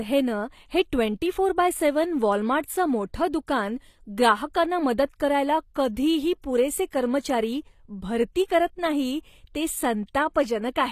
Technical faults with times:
0.00-10.91 HE-AAC compression

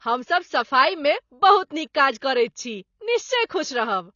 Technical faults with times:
0.00-4.15 AAC compression

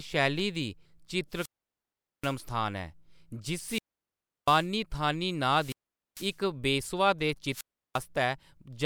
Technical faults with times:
1.30-2.37 wireless microphone squelch dropout
3.57-4.69 wireless microphone squelch dropout
5.46-6.41 wireless microphone squelch dropout
7.50-8.03 wireless microphone squelch dropout

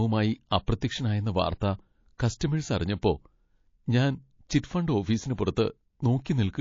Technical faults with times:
0.00-6.60 MP3 compression
5.36-5.38 pre-echo

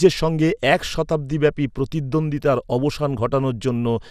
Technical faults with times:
0.00-4.10 MP2 compression

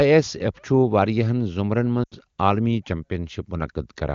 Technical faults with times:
2.03-2.14 lost AMR speech frames

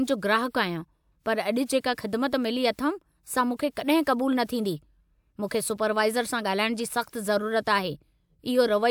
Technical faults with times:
none

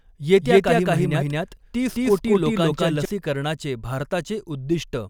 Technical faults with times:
0.41-3.05 doubled audio track

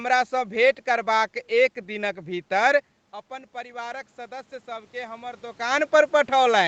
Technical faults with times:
3.27-5.86 automatic gain rising

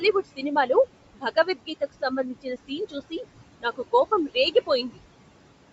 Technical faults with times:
0.00-5.73 noise suppressor artifacts
0.00-5.73 Bluetooth LC3 compression
0.22-0.44 speech cut by the noise suppressor
1.14-3.25 speech cut by the noise suppressor
3.61-4.98 speech cut by the noise suppressor

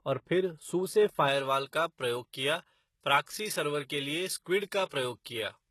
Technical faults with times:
0.00-5.70 HE-AAC compression
1.28-5.70 pre-emphasis left on
4.89-4.92 pre-echo

